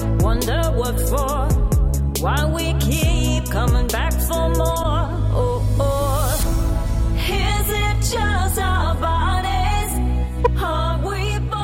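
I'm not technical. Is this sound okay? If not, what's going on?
No. At 4.82 to 4.85 s and 10.44 to 10.47 s, the sound skips ahead with a quick glitch: a chirp, a noise burst or a tiny gap. Each lasts about 30 ms. The likely cause is a broken MP3 bit reservoir, where missing pieces make the next piece read the wrong data.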